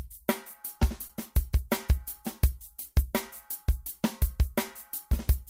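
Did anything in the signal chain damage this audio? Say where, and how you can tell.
Yes, at the network stage: short concealed packet loss between 1.07 and 1.11 s. About 20 ms of audio missed the decoder's deadline, so the receiver extrapolated the preceding sound to fill the gap and then blended back into the real signal, leaving a brief smear.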